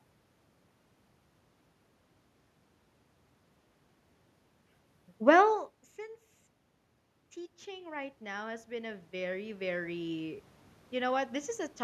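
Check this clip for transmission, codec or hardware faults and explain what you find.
Two faults appear, both from the automatic gain control acting on speech.

From 5.2 to 6.06 s, automatic gain falling occurs. The control judges the input too loud and cuts gain by about 4 dB. Voice and background sink together.

From 7.64 to 10.51 s, automatic gain rising follows. The input drops by about 14 dB, and the control slowly restores about 11 dB. Voice and room noise swell together.

Around 5.5 s the talker moves relative to the microphone, which is not a system fault.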